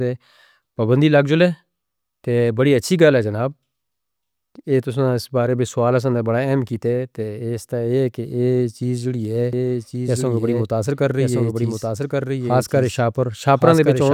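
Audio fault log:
9.53 s to end, doubled audio track: right after "ای چیز جڑی ہے" a second copy of the speech appears abruptly and runs to the end, trailing the original by about one second and sitting roughly 5 dB lower. It has the same full bandwidth and carries no reverb tail or room colour, so it sounds like a dry overlapping echo rather than a reflection. This likely comes from the signal being captured again through a slower path, or from two copies being left out of step in an edit.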